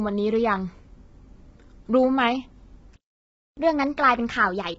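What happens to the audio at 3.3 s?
At 3.3 s the audio is in the middle of a playback stall. The sound stops abruptly at 2.96 s and stays completely silent for about 0.61 s, resuming at 3.57 s. The likely cause is that the player ran short of data or its output thread was held up, so nothing reached the speakers until it caught up. What separates this from a network dropout or concealed packet loss is the gap itself: it is one clean, continuous silence of over half a second, with no smeared, repeated or faded fragments filling it.

The stall sits on top of low-delay AAC compression that runs through the whole clip, including the sound on either side of the gap. The speech is rough and grainy, with noise filling the spaces between harmonics, and nothing is present above 7.7 kHz. This likely comes from an AAC-ELD encoder with short frames at a low rate, consistent with roughly 16 kbps. That texture and the hard top-band cut distinguish it from ordinary band-limited or narrowband audio, which stays clean below its cutoff.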